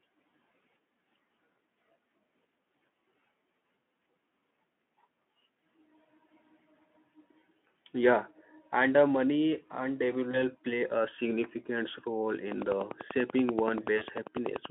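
VoIP packet loss concealed by the speech codec appears at 10.31–10.49 s, just after "and uh money and", and at 13.97–14.04 s. A 20 ms gap, then a 40 ms gap, is filled by extrapolating the last pitch and filter through the Speex telephone-band path, giving a brief, fading smear.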